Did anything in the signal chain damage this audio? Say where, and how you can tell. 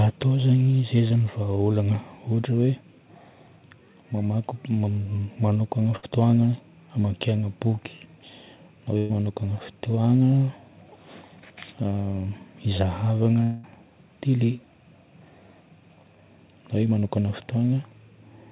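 Yes, the network damaged it. Short concealed packet loss shows up as brief smears at 1.08 s and 17.0 s, each about 20 ms patched by continuing the previous sound.

Bursts of packet loss at 5.96–6.09 s and 8.98–9.11 s: the last sound is stretched into a fading buzz or hiss, about 60 and 120 ms missing, before the audio picks up further on.

At 13.43–13.66 s there's a 200 ms held, fading fill over the narrowband, sub-4 kHz audio, likely a long network dropout concealed end to end.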